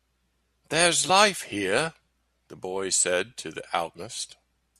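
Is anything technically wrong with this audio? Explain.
Yes. Compressed frames are skipped at 1.09 s and 3.95 s: missing or rejected frames drop roughly 40 ms and then about a tenth of a second of speech. At each point the speech jumps ahead abruptly, with a short stretch of it cut out.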